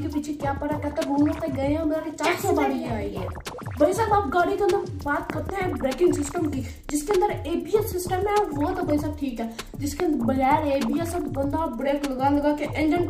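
Loud pops, sharp thumps well above the surrounding level, land on the audio in pairs at 5.30–5.52 s and 6.89–7.13 s, then singly at 10.00–10.02 s. The sound carries on beneath each one, unlike a dropout. They are likely voltage spikes from a plug, switch or static discharge.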